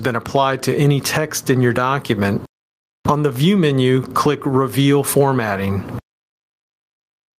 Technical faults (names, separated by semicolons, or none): gain pumping